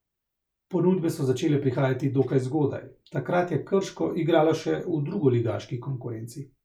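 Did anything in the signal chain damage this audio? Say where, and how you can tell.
No, nothing in the signal chain has damaged this speech recording. No stage of the chain leaves an audible mark anywhere in the audio.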